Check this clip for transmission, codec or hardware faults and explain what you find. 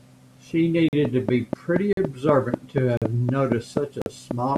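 Two faults turn up in this speech clip: dropouts at the chunk joins, and a steady click train over most of it.

The gap between chunks shows up four times, at 0.89–0.93 s, 1.93–1.97 s, 2.97–3.02 s and 4.02–4.06 s. Each hole is 44 ms long, and they recur about once a second. That points to audio delivered in 1-second chunks, with silence inserted at each join, either from codec padding or from playback starting each chunk late. You hear short dropouts on a regular beat.

The train of clicks starts at 1.05 s and runs to 4.57 s. It has around fifteen clicks at a regular 4.15 per second, each peaking roughly 15 dB above the speech. They all have much the same shape, so it sounds like an even ticking laid over the voice that continues through the pauses. The likely source is interference from nearby equipment or a faulty connection or power supply.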